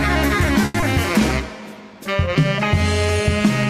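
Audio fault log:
0.65–0.76 s, short stall from a late packet: the jitter buffer ran dry, so the last sound is held for 90 ms, adding 90 ms of delay, with nothing lost.
0.80–0.84 s, short concealed packet loss: 40 ms never arrived. The receiver extended the preceding sound over 20 ms and caught up by about 20 ms, leaving a brief smear.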